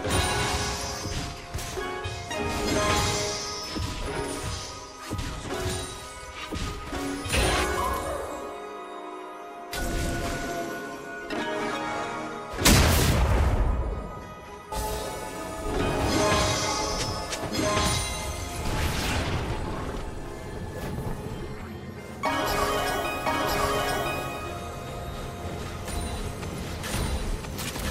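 A doubled audio track starts abruptly at 23.26 s and runs to the end. A second full-band copy of the sound trails about a second behind at roughly the same level, with no decay or room colour, likely because a slower capture path recorded it again.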